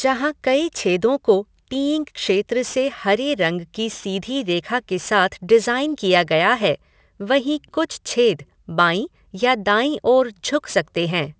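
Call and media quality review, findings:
Aliasing throughout: sibilants gritty and metallic, energy packed against 8 kHz. Downsampler lacking an anti-alias filter folds content above 8 kHz back down, fitting a 48 to 16 kHz resample. Aliases about 25 dB under speech. Unlike band-limiting, adds false-pitch grit, not dullness.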